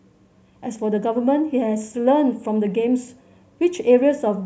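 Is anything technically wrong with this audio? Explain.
No, nothing in this speech recording stands out as a technical problem, so there's nothing here to flag.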